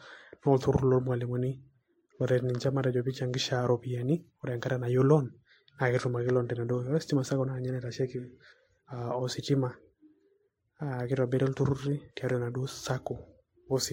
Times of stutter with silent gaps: none

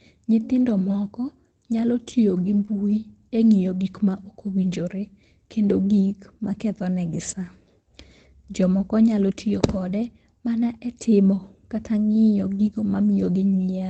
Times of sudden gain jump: none

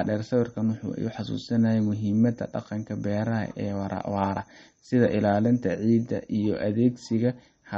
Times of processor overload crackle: none

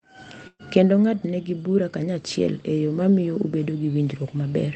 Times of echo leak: none

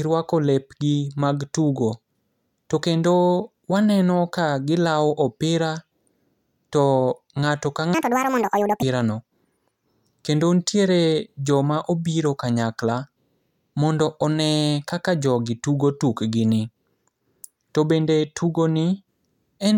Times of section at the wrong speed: 7.94-8.83

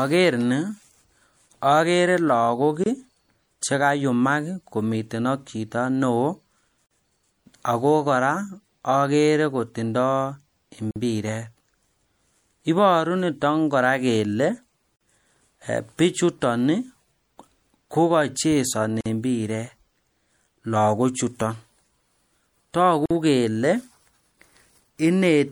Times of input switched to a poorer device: none

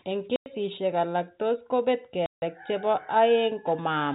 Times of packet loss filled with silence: 0.36-0.46, 2.26-2.42

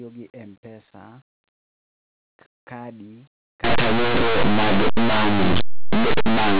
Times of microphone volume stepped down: none

